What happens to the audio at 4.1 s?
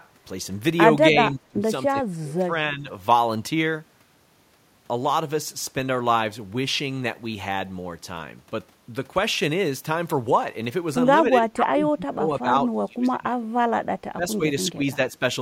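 Nothing goes wrong at 4.1 s; the speech carries on intact through that moment.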